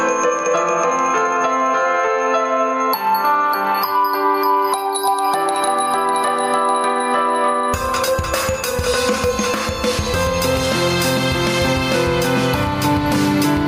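Gain pumping runs through the whole clip: the gain swings around 10 dB, likely from input gain set far too high with a fast limiter clamping down on each loud sound.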